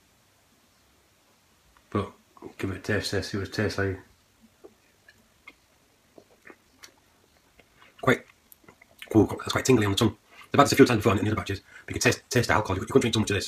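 At 4.12 s a time-stretched section begins and runs to the end: the pace abruptly jumps to 1.76 times faster with unchanged pitch, likely from software dropping short pieces to shorten it. It sounds rushed. A spectrogram shows events packed tighter while harmonic bands keep their frequencies.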